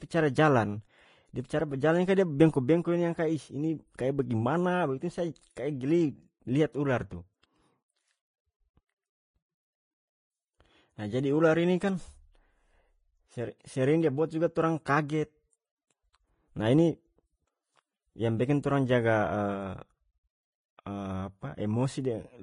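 Heavy lossy coding, likely Vorbis compression at a rate that fits about 24 kbps, removes everything above 10.5 kHz and coarsely quantises the treble, leaving the speech plainly hissy and grainy throughout. At 3.97 s, pre-echo: coding noise spread across a block arrives before a sharp attack, so a short hiss leads it by 13 ms and blurs its onset.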